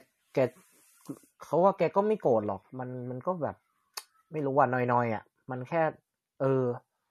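From start to finish the speech carries plainly audible damage, likely from MP3 compression at a low bitrate, with the sound pointing to something around 48 kbps. Nothing sits above 13.2 kHz, where the encoder has cut the treble outright. Weak frequency lines drop in and out from frame to frame, giving a watery, swirling texture and metallic chirps on s sounds, while attacks smear. A spectrogram shows a hard ceiling at 13.2 kHz and speckled, flickering patches below it.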